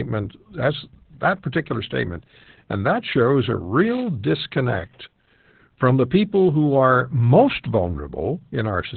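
Opus voice compression runs throughout: nothing above 4.5 kHz, with a hoarse, slightly robotic buzz that plain filtering wouldn't add, which fits narrowband SILK near 8 kbps.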